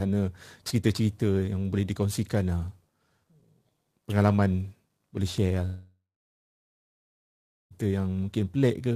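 At 5.65 s, just after "pengalaman boleh share lah", the speech stops. The last sound smears into a fading buzz, then about 1.7 s of silence follows. Speech returns at 7.73 s with roughly 2 s missing. This is likely a long network dropout.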